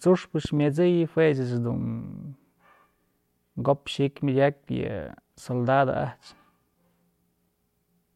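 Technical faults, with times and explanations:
0.45 to 0.60 s, loud pop: two sharp thumps, about 5 dB above the speech, likely from a voltage spike; the speech continues underneath rather than dropping out.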